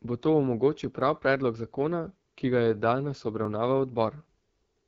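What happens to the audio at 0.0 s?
Right from 0.0 s the speech carries AMR wideband (HD Voice) codec damage, and it stays for the whole clip. The codec models speech up to 6.4 kHz with a pulse-excited vocal tract model and fills the band above with shaped noise. Here the coarse, raspy texture points to one of its lowest modes, which fits 8.85 kbit/s. At that rate the pulses are modelled too coarsely, so the speech sounds plainly rough and gritty.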